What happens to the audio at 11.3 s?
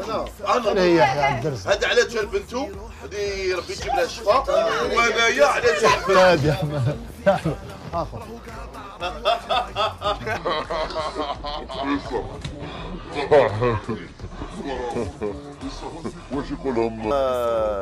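At 11.3 s the audio is inside a section at the wrong speed, running from 10.37 to 17.11 s at 0.733 times its original rate, likely from being played against the wrong clock. Everything drops about five semitones and drags. Unlike a pure pitch shift, timing slows together with the pitch.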